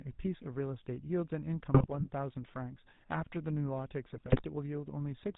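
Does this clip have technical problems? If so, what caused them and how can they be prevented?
Yes. The speech has passed through the GSM full-rate codec. It models the vocal tract, excites it with sparse regular pulses, and discards everything above 4 kHz, so the whole recording sounds plainly buzzy, gravelly and muffled, which fits the 13 kbps GSM rate. Sending the audio over a wideband or modern codec path prevents this.

GSM bit errors hit from 1.74 to 2.08 s and from 4.10 to 4.42 s. Corrupted bits reached the decoder and scrambled its filter, pitch and gain values, so the sound breaks into squawks, pops and gargling for about a third of a second each time. A stronger radio link or better error protection prevents this.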